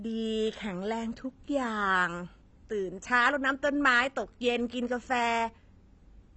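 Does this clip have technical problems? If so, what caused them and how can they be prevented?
Yes. Throughout the speech there is plainly audible damage consistent with AAC compression, likely from AAC-LC encoding at a low bitrate, which fits something near 24 kbps. Nothing is heard above about 8.1 kHz, so the sound is dull. Unlike a plain low-pass filter, the encoder also drops or crudely fills bands it cannot afford, which smears sibilants and gives sustained sounds a warbling, fizzy texture. To prevent it, encode at a higher bitrate or keep a lossless master.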